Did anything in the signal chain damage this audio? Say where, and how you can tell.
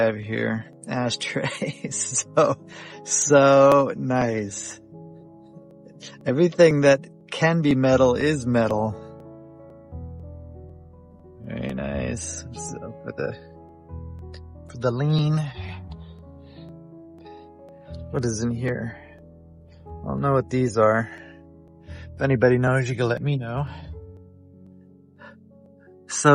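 Yes, at the driver or buffer stage: periodic USB or driver dropouts. From 0.23 s to 26.16 s there's a tick every 0.5 s, around fifty in all, where something blocks the bus and about a millisecond of audio is skipped outright.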